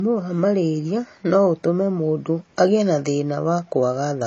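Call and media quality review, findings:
Low-bitrate audio saved at a high bitrate, whole clip. Speech band-limited, nothing above 8.3 kHz, with smeared, swirly coding artefacts despite a large MP3 file. Likely cause: a re-encode of a low-rate MP3, consistent with 32 kbit/s, at around 256 kbit/s. Distinguishing sign: the artefacts and ceiling match the earlier encoding, and the final pass adds no audible damage of its own.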